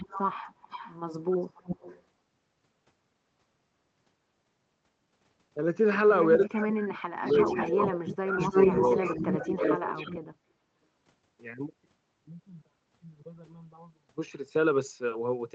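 Echo leak at 0.00–0.96 s and 1.55–2.03 s: a faint delayed copy of the speech trails the talker by about 285 ms, around 15 dB below it. This is likely a far-end loudspeaker whose echo canceller let part of the microphone pickup back into the call. The call path is Opus at about 20 kbps with an 8 kHz audio bandwidth.

Speech suppressed in double talk at 6.38–7.26 s and 7.56–8.98 s: while the echoed sound overlaps the talker, the speech dips. The drop reaches about 40 dB in the first stretch, affecting roughly three quarters of a second, and about 25 dB in the second, affecting roughly a second. The canceller likely could not tell its own talker from the returning echo, so it turned both down.

The echo leak returns through the same passage, with a delay drifting from about 305 to 314 ms. It appears at 6.69–6.74 s at about 10 dB down, at 7.26–7.90 s at about 5 dB down, and at 8.09–8.16 s at about 10 dB down. 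From 8.40 to 10.19 s it is a long, continuous echo at roughly the level of the speech itself.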